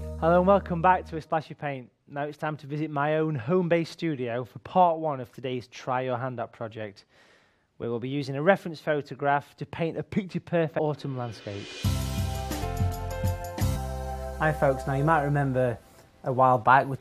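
Compressed frames were skipped, either lost from the file or rejected by the decoder as damaged, so the audio jumps forward at 10.78 s by about 150 ms and at 12.61 s and 13.75 s by about 300 ms each, consistent with runs of 23.2 ms frames, each join heard as a brief blip or click.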